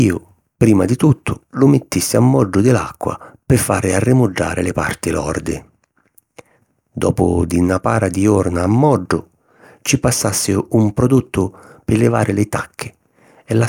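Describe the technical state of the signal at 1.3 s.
At 1.3 s the speech signal is intact, with no audible fault at that moment.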